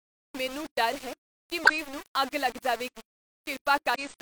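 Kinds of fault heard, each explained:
Low bit depth without dither: A coarse, grainy distortion runs through the whole clip and shifts with the speech. Quiet stretches turn gritty rather than fading smoothly. The error sits only about 15 dB below the speech and rises and falls with it. The likely cause is samples rounded to very few levels, which fits about 5 bits, with no dither added to break up that pattern.
Damaged data in a compressed stream: Two brief glitches break the speech, one from 1.64 to 1.70 s and another from 3.95 to 4.00 s. The first falls between "ਮੈਨੂੰ ਡਰ ਹੈ ਕੀ" and "ਨੂੰ ਅੱਗ ਲੱਗ". Each is a short break such as a chirp, squawk, click or brief hole. Corrupted bytes make the decoder misread those frames, lose its place, and resume at the next frame it can find.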